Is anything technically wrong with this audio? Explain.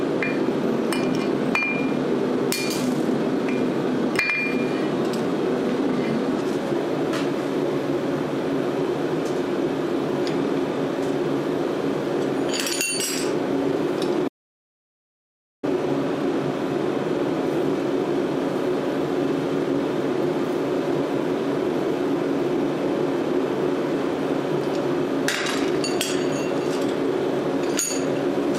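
Yes. From 14.28 to 15.63 s the sound cuts to dead silence with no room tone, then resumes mid-flow: an audio dropout to silence, likely from lost input while recording continued.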